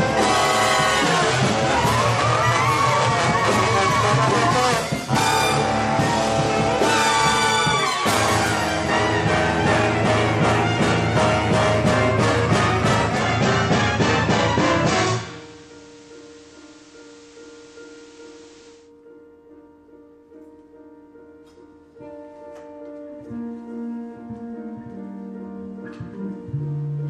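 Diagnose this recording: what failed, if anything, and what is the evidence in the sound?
The receiver stage failed: a digital radio blending to analogue event. At 13.04 s the sound cross-fades over 268 ms to the FM broadcast of the same station, and at 18.93 s it blends back. During that stretch the level drops by about 1 dB, and hiss sits roughly 30 dB below the programme. The receiver lost the digital signal and fell back to the band-limited, noisier FM path.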